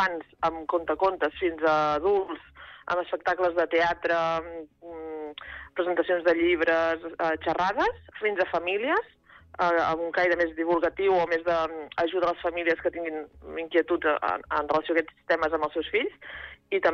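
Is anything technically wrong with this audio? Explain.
Yes. At 14.82 s there is a block of digital silence: for about 5.8 ms the signal falls to silence and then resumes, with no fade at either edge, which fits a 256-sample buffer not being filled in time. It is so short that it sounds like a tick or dip rather than a gap. The silence, with an abrupt step at each edge, sets it apart from a masked dropout or a momentary level dip.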